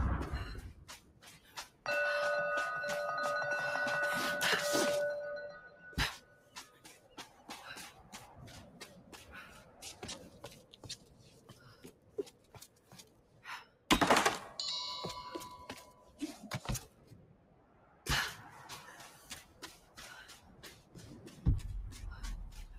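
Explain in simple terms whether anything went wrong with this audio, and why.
Something did go wrong. A noise suppressor applied to music or sounds was left running for the whole clip. It is built for speech, so it treats steady, held sound and fading tails as background noise and keeps turning them down, while sharp attacks slip through. The result is a level that swings noticeably up and down, so the audio pumps and thins out rather than sitting evenly.

At specific points you can hear sound cut by the noise suppressor. The held or decaying parts sink in level, or their tails end early. This happens at 0.8 to 1.85 s, 5.68 to 7.48 s, 7.95 to 9.13 s, 9.61 to 13.89 s (the longest stretch, about three seconds affected), 15.9 to 16.2 s, 16.88 to 18.06 s, 19.44 to 19.98 s and 20.38 to 20.96 s.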